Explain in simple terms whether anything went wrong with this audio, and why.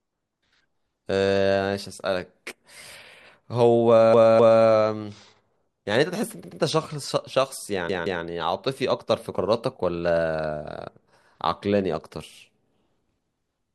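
The speech stutters three times, replaying the same sliver of sound twice more: a quarter-second chunk at 4.14 s, a shorter one at 6.44 s, and another at 7.89 s. These are repeated frames: pieces of the compressed audio were copied again, stretching the clip.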